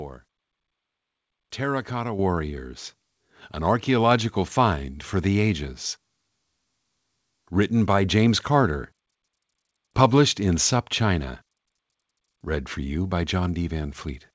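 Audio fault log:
2.19 s, microphone volume stepped up: the level of the speech and the room background jumps together by about 7 dB in a single step, with no gradual ramp. This is what happens when call software judges the microphone too quiet and raises the device's input gain at once, so everything before the step sits lower and everything after it louder. The call path's band limit, with nothing above 8 kHz, is the same on both sides of the jump.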